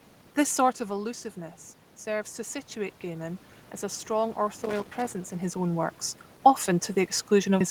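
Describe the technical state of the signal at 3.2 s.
At 3.2 s the automatic gain is still rising (2.05–3.5 s, after "sort of allusiveness"). Input fell about 9 dB, so gain climbs about 4 dB, swelling voice and noise floor together: a gradual waveform-envelope ramp and brightening spectrogram.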